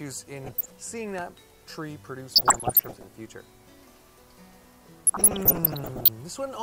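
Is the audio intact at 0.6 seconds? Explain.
No. From 0.44 to 0.72 s the sound breaks into short blips of noise in single sub-bands, laid over the programme. This is DAB burbling. Weak reception let bit errors, at a rate of around one percent, slip past the error correction into the MP2 audio data. Corrupted samples put short noise blips in single sub-bands, and corrupted scale factors make sub-bands jump in level for up to a frame, and the damage fits roughly a dozen affected frames.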